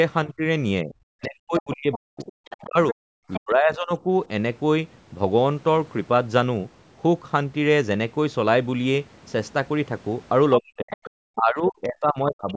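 From 0.26 to 4.06 s, an echo canceller likely faced both sides talking at once and could not tell the talker apart from its loudspeaker echo, so it turned everything down. This is speech suppressed in double talk: the speech dips and breaks into pieces for about two seconds in total, falling by around 40 dB at its deepest. Inside that span, from 1.22 to 3.39 s, the other side's voice leaks through, because the canceller likely left some loudspeaker sound in the microphone signal. That second voice sits roughly 15 dB below the talker.

The same pattern returns near the end. From 10.58 to 11.1 s the other side's voice leaks through again at a similar level. From 10.6 s to the end of the clip, speech is suppressed in double talk once more, likely as the canceller again clamps down while both sides overlap. The talker's speech drops and breaks up for about one and a half seconds in total, again reaching around 40 dB down. 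A last, much fainter scrap of the other voice, about 25 dB below the speech, slips through from 12.49 to 12.53 s. Throughout, the call's microphone processing leaves nothing above 8 kHz.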